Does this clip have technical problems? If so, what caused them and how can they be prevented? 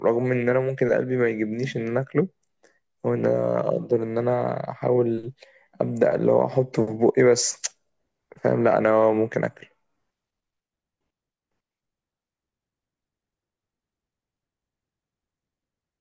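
No, this clip has no technical problems, so there is nothing to prevent.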